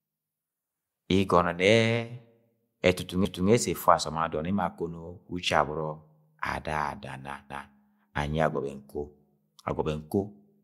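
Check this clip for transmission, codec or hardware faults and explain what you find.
The speech shows overlapping chunks, a processing fault that recurs at regular intervals. At 3.25 to 3.50 s and again at 7.50 to 7.75 s, a 250 ms stretch of audio plays twice in succession. The spacing fits 4-second processing blocks where each new block begins a quarter-second before the previous one ends, so the overlap is replayed at every join. Each join is heard as a short stutter.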